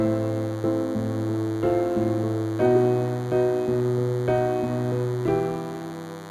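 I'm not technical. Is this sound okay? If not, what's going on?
No. DECT cordless phone buzz runs throughout: a nearby cordless phone's radio pulses, 100 per second, leak into the audio equipment as a thin, steady buzz.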